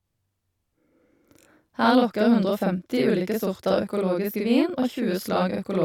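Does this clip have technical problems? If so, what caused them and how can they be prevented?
Yes. Channel delay doubling runs throughout. One channel lags by 42.7 ms, which fits a 2048-sample buffer. The mono sum repeats the speech as a slap echo. Align both channels before summing to mono.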